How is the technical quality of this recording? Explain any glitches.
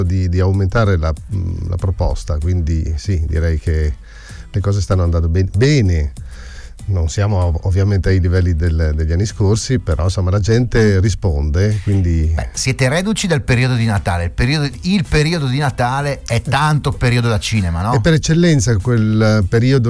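No technical faults are audible.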